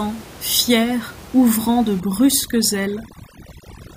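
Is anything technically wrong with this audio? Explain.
Yes. From 2.0 s to the end, the background drops and breaks up into twinkling specks. This is overdone noise removal: an over-aggressive reduction stage shuts off individual frequency bands near its noise estimate, stripping quieter parts of the voice along with the room noise. Before 2.0 s, that room noise sits about 20 dB below the speech.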